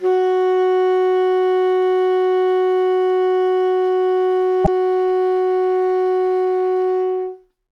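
At 4.61 s the music breaks into a brief glitch lasting about 70 ms: damaged data in the compressed stream made the decoder lose sync until the next frame header.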